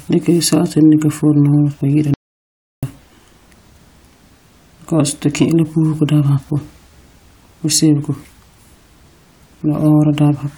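At 2.14 s the speech cuts off mid-flow and the track falls to silence until 2.83 s, roughly 0.69 s of audio missing. This is an audio dropout to silence, likely from the input signal being lost while the recorder kept writing zeros. What separates it from a natural pause or a noise gate is that no room tone or fade survives. The silence is complete, and the speech resumes abruptly mid-flow.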